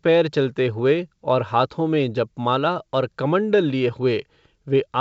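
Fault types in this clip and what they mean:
No faults can be heard.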